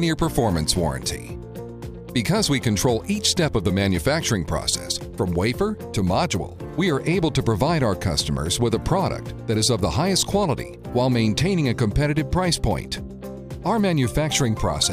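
No technical faults can be heard anywhere in the audio.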